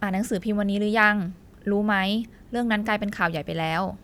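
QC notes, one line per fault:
Nothing stood out on listening.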